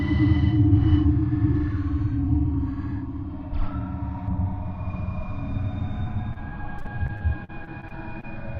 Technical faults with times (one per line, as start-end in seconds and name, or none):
4.28-8.59 de-emphasis applied wrongly
6.33-8.25 repeated packet loss (robotic sound)